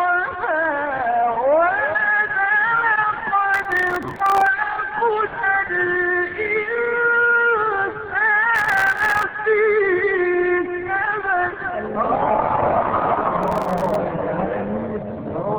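Processor overload crackle appears from 3.54 to 4.47 s, 8.55 to 9.23 s and 13.43 to 13.95 s. Dozens of tiny buffers, each around a millisecond and a half, miss their deadline and drop to silence. The sound tears into gritty crackle until each burst ends.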